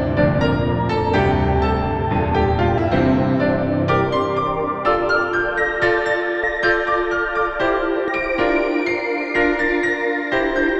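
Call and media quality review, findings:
Compressed frames skipped at 2.77 s, 6.43 s and 8.07 s: audio jumps ahead by about 150 ms, 150 ms and 200 ms, consistent with roughly seven dropped 26.1 ms frames at the decoder. Overlapping neighbouring frames smear each join into a brief blip, not a click.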